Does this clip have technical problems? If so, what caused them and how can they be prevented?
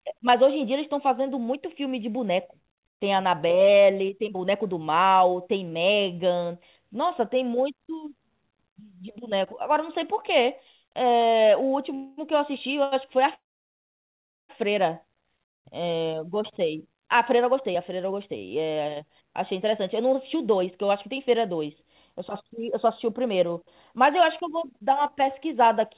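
Yes. Call audio freeze, at 11.94 to 12.19 s and 13.34 to 14.51 s: packets were likely held up in transit and the jitter buffer emptied. The receiver filled the first gap with about 0.23 s of fading continuation, and the second with about 1.15 s, most of it silent, before resuming where it stopped. A steadier network path, or a larger adaptive jitter buffer, would prevent this.

Short stall from a late packet, at 12.83 to 12.94 s: one packet arrived late, so the buffer briefly ran dry and the last sound was held for 83 ms, with a slight buzz or dip. More buffer headroom for late arrivals would prevent this.

Jitter buffer speed-up, from 16.59 s to the end: the buffer held more audio than it aims for, and the receiver trimmed pitch-period slices, removing about half a second. The sound plays at 105 % speed at the same pitch and sounds hurried. Smoother packet delivery, which avoids the backlog, would prevent this.

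On the call path itself, the narrowband codec leaves nothing above 4 kHz, which fits G.711 mu-law.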